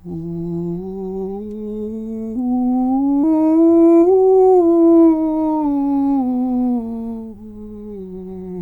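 At 3.23 to 3.25 s the music skips ahead: roughly 0.7 s is dropped and the two edges are joined with no silent gap, unlike a dropout. From 3.33 to 5.38 s, a jitter buffer speed-up trims short pitch-period pieces, about 0.3 s in total, so the music runs at 117% tempo while its pitch stays unchanged.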